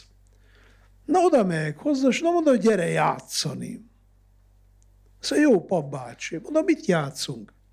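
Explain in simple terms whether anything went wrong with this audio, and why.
Nothing went wrong here: the speech comes through without any audible technical fault.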